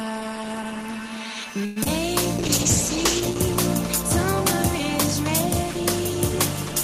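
At 1.65 s the sound stops moving forward and the last moment is stretched into a fading buzz for about 107 ms, until 1.78 s. It never drops to true silence, and nothing is lost. The audio resumes exactly where it left off, just later. This is a call audio freeze, likely caused by packets stalling in transit and the jitter buffer running dry. The receiver extended the final sound until data returned, leaving the stream about 107 ms behind where it was.

Shortly after, between 1.84 and 1.87 s, there is a brief smear that reads as short concealed packet loss. About 20 ms of audio never reached the decoder in time. The receiver patched the hole with about 13 ms of synthesised continuation, extrapolated from the preceding sound, and then crossfaded back into the real signal. The result is a momentary wobble rather than a clean dropout, and the material that was actually lost is gone, not delayed.

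From 2.38 to 3.47 s the sound turns coarser and duller. This is a call bitrate drop. The bandwidth estimate fell, and the encoder was pushed from 32 kbps down to 10 kbps, holding near that floor for roughly a second. At that rate Opus quantises more heavily and trims the upper frequencies, so the audio sounds rough, watery or muffled. It returns to full clarity once the bitrate climbs back after 3.47 s.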